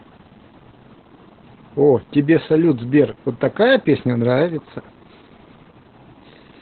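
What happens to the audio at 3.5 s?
At 3.5 s the speech carries Opus voice compression, present throughout the clip. The narrowband SILK coder keeps nothing above 4.3 kHz and coarsely codes the excitation, consistent with roughly 8 kbps, so the voice sounds muffled, hoarse and robotic. A spectrogram shows a flat ceiling at 4.3 kHz.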